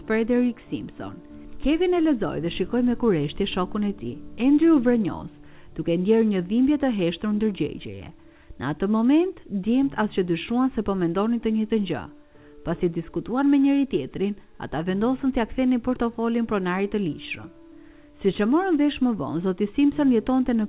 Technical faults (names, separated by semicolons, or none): none